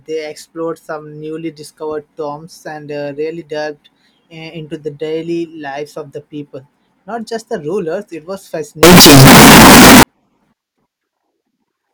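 From 8.83 to 10.03 s the speech turns into a wall of harsh, very loud distortion, likely from signed and unsigned mixed up in 16-bit samples. Each zero crossing jumps across the entire range, so even quiet moments blare as loudly as everything else.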